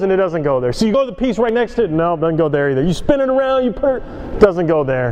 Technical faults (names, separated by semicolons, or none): compressed frames skipped; dropped buffer (overrun)